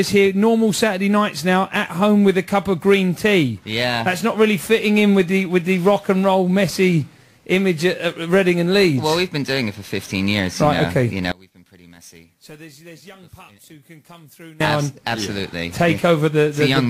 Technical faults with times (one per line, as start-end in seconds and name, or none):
11.32-14.60 one channel inverted